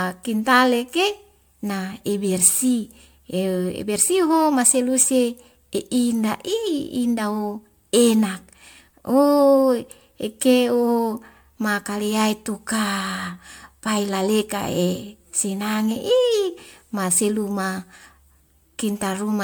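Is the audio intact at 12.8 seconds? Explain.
No. Generation loss runs through the whole clip: the speech was likely re-encoded as MP3 around seven times. Each pass adds new quantisation noise and spectral holes, so at 12.8 seconds it sounds swirly and hollow, with smeared attacks.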